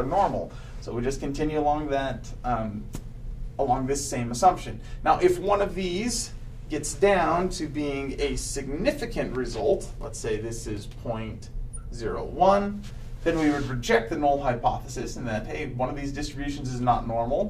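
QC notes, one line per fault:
No faults were heard in this clip. Nothing in the audio calls for a QC entry.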